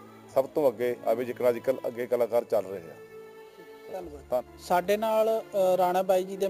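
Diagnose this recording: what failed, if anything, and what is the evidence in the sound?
Imaging from sample-and-hold upsampling occurs at the sample-rate conversion stage and runs throughout. A bright metallic fizz tracks the sound's level, with mirrored content between 8 and 16 kHz about 23 dB down, which fits 16 kHz material raised to 44.1 kHz by repeating samples unfiltered. A spectrogram shows the band's harmonics reflected upward above 8 kHz, and the waveform has stair-stepped edges.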